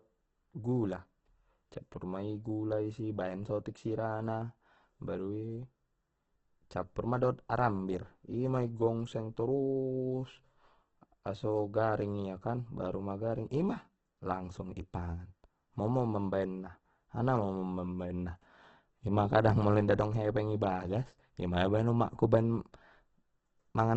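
Throughout the speech, the sound is rough and grainy, with noise-filled tones and nothing above 8.2 kHz. The likely cause is heavy Opus compression: the music-mode encoder keeps band energies but fills starved bands with folded or noise content, which fits roughly 12 kbps.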